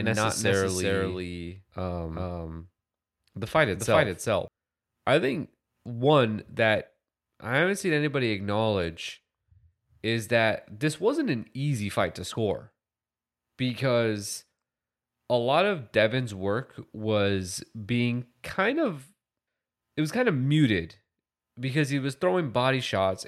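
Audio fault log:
0.00–4.48 s, doubled audio track: an equally loud full-band copy trails by roughly 0.4 s, likely from a second capture path; the spectrogram shows each pattern repeated, then the copy cuts off abruptly.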